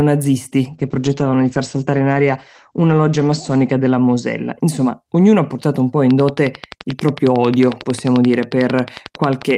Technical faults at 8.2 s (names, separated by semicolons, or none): train of clicks